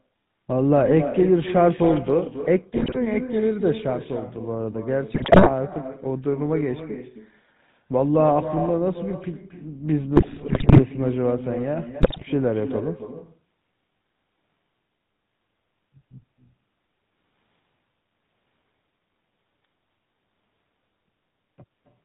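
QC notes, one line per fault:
Throughout, echo with no canceller: every phrase is trailed by a fainter, thinner copy arriving about a third of a second later and about 10 dB below the direct sound, so syllables smear into their own shadow. The far end is playing the call over a loudspeaker, its microphone is catching that playback, and nothing subtracts it. The sound returns after travelling out and back across the network, and that round trip sets the delay.
Throughout, GSM full-rate codec: the audio has a buzzy, gravelly grain and a dull top with nothing above 4 kHz, and the roughness is plainly audible on every stretch. The codec does not send the waveform itself. It sends a vocal-tract filter driven by a coarse, regularly spaced pulse excitation that keeps only one sample in three, which fits the 13 kbps full-rate codec. That sparse excitation is what turns smooth sound into this rasping texture.
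2.76 to 2.97 s, 5.14 to 5.50 s, 10.16 to 10.80 s and 12.02 to 12.23 s, GSM bit errors: each stretch breaks into squawks, pops and gargling, with sudden level jumps and a warped tonal colour. The longest, at 10.16 s, lasts about 0.6 s. Flipped bits from a weak radio link are reaching the decoder. Corrupted filter, pitch and gain values distort the spectrum or spike the level for each damaged 20 ms frame, which points to runs of several consecutive frames being hit.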